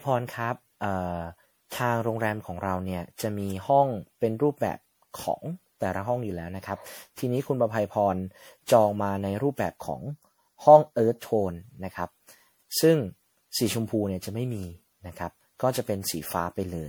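Repeated lossy re-encoding, likely around ten MP3 passes at 96 kbit/s, causes generation loss throughout the speech, leaving it swirly, smeared and hollow, with blurred consonant attacks. From 9.81 to 11.21 s, one channel runs about 0.2 ms late before the mono sum, causing channel delay (comb filtering): a phasey, hollow tone with a notch near 3 kHz.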